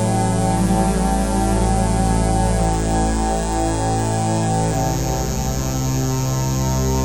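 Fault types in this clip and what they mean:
No technical faults can be heard anywhere in this audio. Nothing in it calls for a line of its own.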